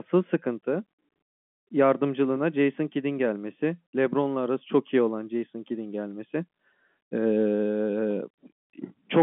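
Nothing stood out on listening to this speech recording, which comes across as an ordinary telephone line.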